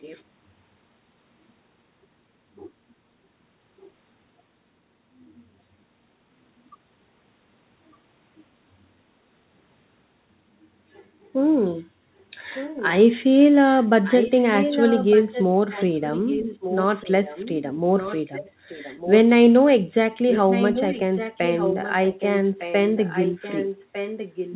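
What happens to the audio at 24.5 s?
At 24.5 s an echo leak is audible, running from 22.96 s to the end. A fainter copy of the speech returns about 1.2 s late, roughly 10 dB down, likely residue a far-end echo canceller missed. A spectrogram shows the same harmonic patterns repeated weaker and shifted later, all below 4 kHz.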